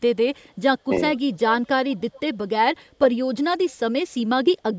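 Around 1.15 to 1.37 s a faint delayed copy of the speech creeps in, roughly 20 dB under the talker and trailing by 416 ms. That's echo leak, likely from a far-end speakerphone whose echo canceller let some of its pickup slip back. It returns as a barely-there scrap at 1.65 to 1.69 s, then more noticeably at 1.91 to 2.37 s, about 25 dB down, and a last very faint flicker at 3.70 to 3.75 s.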